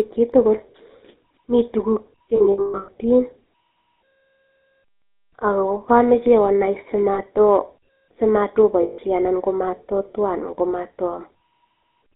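GSM full-rate codec damage runs through this speech clip, plainly audible as a buzzy, gravelly roughness with nothing above 4 kHz, which fits the 13 kbps full-rate coder rebuilding the vocal tract from a sparse, regularly pulsed excitation. Lost GSM frames occur at 2.36 to 2.92 s, 7.14 to 7.20 s and 8.82 to 8.99 s. In each gap the decoder repeats the last good frame, producing a rough, metallic ring. The first gap is scattered across about half a second, with the longest run around 150 ms.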